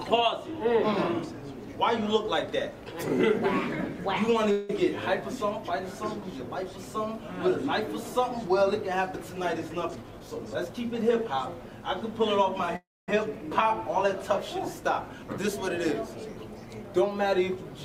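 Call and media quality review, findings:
Call audio freeze at 4.51–4.70 s and 12.76–13.09 s. Last sound held as a fading buzz, 178 ms then 316 ms. Second fades to about 240 ms of silence. Nothing lost; playback resumes late. Likely cause: delayed packets draining the jitter buffer.

Jitter buffer speed-up at 9.86–11.13 s (113%), 15.14–15.56 s (109%) and 16.03–16.84 s (112%). Hurried, same pitch. Receiver cutting short pitch-period slices to shrink an overfull buffer. Roughly 0.15 s, 40 ms and 0.1 s removed.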